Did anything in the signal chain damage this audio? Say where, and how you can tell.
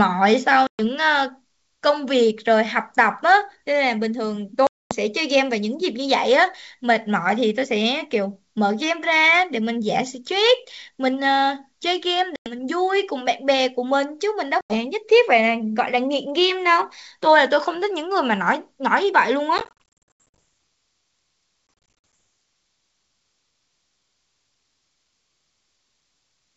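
Yes, at the network stage: packet loss on an ADPCM call, over an otherwise clean-sounding G.722 wideband link. There are hard-edged silent holes at 0.67 s (120 ms), 4.67 s (240 ms), 12.36 s (100 ms) and 14.61 s (90 ms), plus scattered dropouts from 19.58 to 20.35 s and from 21.67 to 22.13 s, with runs of up to 80 ms. Each time the speech comes back slightly distorted before settling, because the decoder's predictor and step size have drifted away from the sender's.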